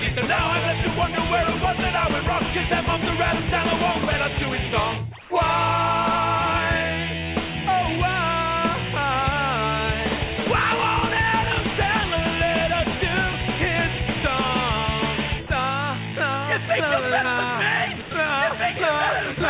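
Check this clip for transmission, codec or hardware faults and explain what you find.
Two kinds of fault are audible, both from discontinuous transmission. Nothing is heard above 4 kHz, as on a narrowband call path.

Comfort noise in place of the background, 5.21 to 5.30 s. For 90 ms the quiet background, about 22 dB below the loud parts, turns into steady, featureless hiss about 4 dB quieter. The likely cause is the sender pausing transmission while the receiver synthesised shaped noise.

Sound dropped by the voice detector, at 15.47 to 15.50 s, 18.02 to 18.11 s and 19.34 to 19.37 s. Brief stretches of 30, 90 and 30 ms vanish under flat noise. The detector likely mistook quiet sound for background and stopped sending until it triggered again.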